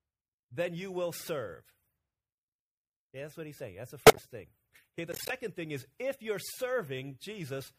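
Speech with corrupt frames decoded at 4.07–4.19 s and 5.12–5.31 s, before "thing is if you're": flipped bits play as chirps, squeaks or bursts of noise, not the silence or smeared repeats of concealment.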